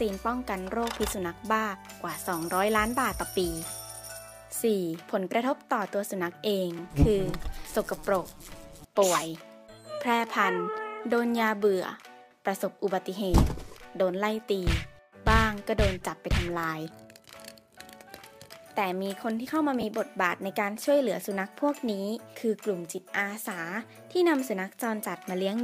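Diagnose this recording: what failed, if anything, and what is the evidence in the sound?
Lost LE Audio frames on the Bluetooth link, 19.81 to 19.83 s: a brief noisy smear where the LC3 decoder concealed about 20 ms by reusing the last spectrum with random signs, fitting two dropped frames.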